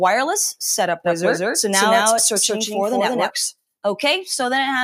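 A slower second path likely adds the audio again from 1.04 to 3.30 s, a doubled audio track: an equally loud, dry copy trails about 200 ms behind, cutting in and out abruptly.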